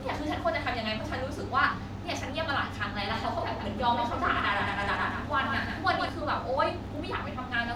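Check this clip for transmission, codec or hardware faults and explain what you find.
One fault stands out in this speech. A doubled audio track runs from 3.11 to 6.09 s, likely from a second, slower capture path. An undecayed copy roughly 150 ms late and about 5 dB quieter starts and stops abruptly.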